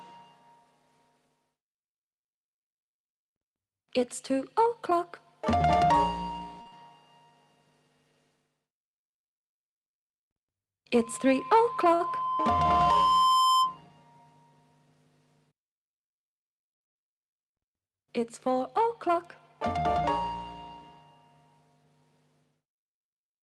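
At 6.61 s the sound hangs for about 43 ms, held with a faint buzz or dip. This is a short stall from a late packet: the jitter buffer ran dry and the receiver stretched the last sound until the packet arrived. Right after, from 6.68 to 6.74 s, a brief smear replaces about 40 ms of audio. That is short concealed packet loss, where the receiver extrapolated the previous sound across the gap and blended back in.

From 10.94 s a steady 1 kHz tone swells over roughly three seconds into a squeal around 5 dB above the program before stopping at 13.78 s. This is loudspeaker feedback squeal: the microphone picked up its own loudspeaker, and at that frequency the loop gain exceeded one.

Within the squeal, from 11.18 to 11.61 s, the audio hurries at about 110% speed with unchanged pitch. This is a jitter buffer speed-up, trimming roughly 50 ms of pitch periods to shed excess delay. At 11.94 s another late-packet stall holds the sound for about 59 ms.

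From 18.80 to 20.01 s a gentler jitter buffer speed-up runs at about 103%, again dropping roughly 50 ms. The sound carries the usual coding texture and 12 kHz top end expected of an Opus call path.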